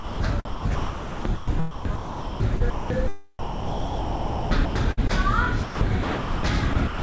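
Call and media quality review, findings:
Sound dropped by the voice detector, 0.00–0.20 s. Opening sound is missing, replaced by steady synthetic noise for about 0.2 s. Likely sender voice detector classed the onset as background and stopped sending. Receiver filled the gap with comfort noise. Full sound resumes once detection triggers.

Sound chopped by the voice detector at 0.45–2.90 s, 3.39–5.11 s, 5.63–6.43 s and 6.73–7.02 s. Sound breaks up repeatedly. Quieter parts are swapped for comfort noise. Likely cause is the sender voice detector toggling on and off. Replaced time is about 1.6 s, 1.3 s, 0.6 s and 0.2 s respectively. The band stops near 8 kHz, consistent with a wideband call codec.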